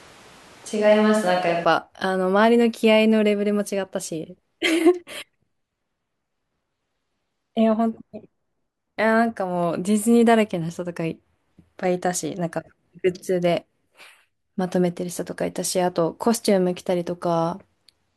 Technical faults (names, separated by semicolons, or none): switch to a distant microphone